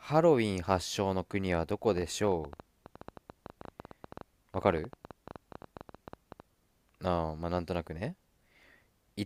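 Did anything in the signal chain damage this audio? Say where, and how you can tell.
Yes. From 1.89 s to 6.41 s a train of clicks, about 11.5 per second at uneven spacing and some fifty in all, ticks over the speech and its pauses, peaking around 5 dB above it. The irregular pace, unlike steady buffer-underrun clicks, points to likely interference in the analogue wiring.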